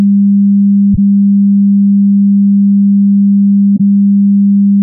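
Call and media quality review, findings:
Damaged data in a compressed stream: short chirps, squawks, clicks or holes at 0.90–0.98 s and 3.72–3.80 s, about 80 ms each. Decoder stage. Corrupted bytes make frames unreadable, so the decoder misreads or drops them, loses sync and searches for the next valid frame header.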